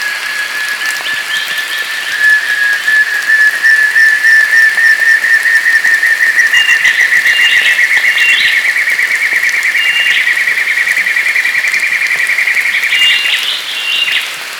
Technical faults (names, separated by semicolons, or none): hard clipping